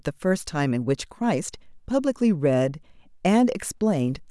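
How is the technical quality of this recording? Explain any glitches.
No audible glitches or faults.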